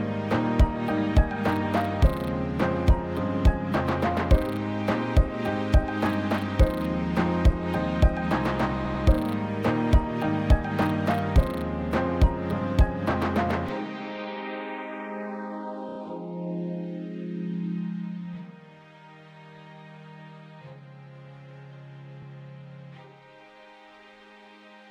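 At 8.85 s the sound stutters with repeated frames. A 96 ms block, which fits three compressed frames, was sent again and plays twice more, adding about 0.19 s. At 15.89 s a 32 ms block, likely a single frame, repeats three extra times as a brief rapid stutter, adding 0.1 s. At 22.22 s one 32 ms block plays once more, a tiny hiccup adding 0.03 s. Each time, the decoder simply replays audio it already played.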